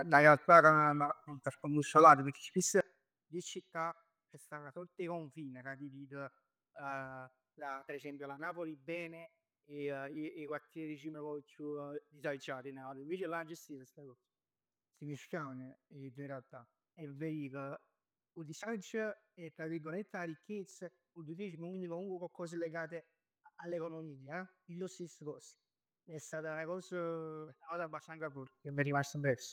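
Zipper noise at 2.56–3.16 s and 28.16–28.84 s: the speech level drops, then later rises, by roughly 15 dB in unsmoothed 2 dB steps at about fifteen a second, so each jump leaves a small click, heard as a rapid ticking over the fade.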